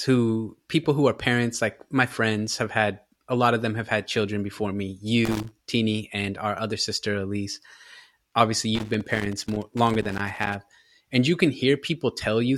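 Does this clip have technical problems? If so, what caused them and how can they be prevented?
Yes. Loose connector crackle breaks in from 5.25 to 5.52 s, right after "had children before me", and again from 8.75 to 10.55 s, ending before "and you can". A worn contact making and breaking chops the signal into irregular scratchy bursts, unlike the evenly spaced ticks of buffer dropouts. Cleaning or replacing the cable and securing its connectors prevents it.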